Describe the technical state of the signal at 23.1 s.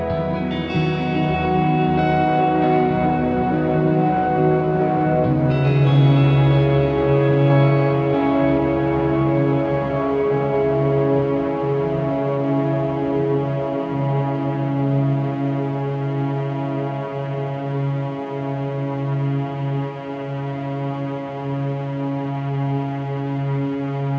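At 23.1 s the audio is intact, with no fault; it has simply passed through a WebRTC call path whose G.722 coding leaves nothing above 8 kHz.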